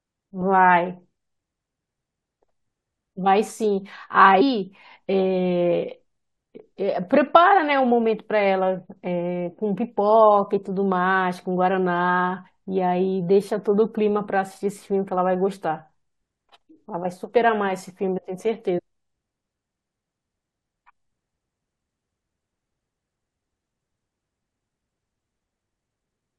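At 18.77 to 18.80 s the speech jumps forward by roughly 150 ms: compressed frames skipped. Missing or rejected frames were never decoded, a gap that fits about seven 23.2 ms frames.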